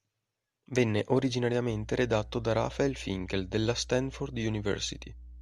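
From 1.70 s to the end, mains hum adds a steady 60 Hz tone from power-line coupling, fixed in pitch, unlike broadband rumble.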